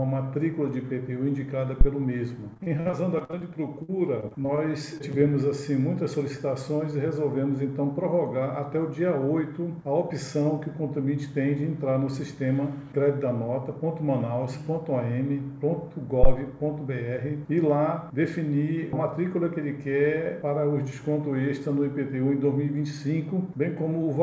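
At 1.81 s a phantom power thump lands: a supply switched on a live input sends a voltage step through the coupling capacitors. It is a deep low thud dying away in about 12 ms, seen as a sharp low-frequency spike in the waveform and a dark smear along the bottom of the spectrogram.

From 2.54 to 3.43 s, and again from 3.83 to 4.60 s, repeated packet loss gives a choppy, robotic sound. Packets kept arriving too late or not at all, and each hole was patched by stretching the last sound. The first stretch has about a dozen holes, the longest 54 ms, with about 30% of it concealed. The second has about half as many, the longest 58 ms, with about 20% concealed. The spectrogram shows frozen, striped harmonics broken by brief breaks.

Short concealed packet loss follows at 4.98 s and from 5.12 to 5.23 s. Each is a hole of about 20 ms filled by continuing the previous sound and then blended back in. 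It is heard as a brief smear or wobble. The second one stretches the timing by around 15 ms, and each shows as a small blurred patch on the spectrogram. Above all of this, nothing extends past 8 kHz, a flat ceiling that fits the G.722 call codec.

At 16.23 s a second phantom power thump arrives, decaying over about 26 ms, more than twice as long as the first, with the same low spike in the waveform.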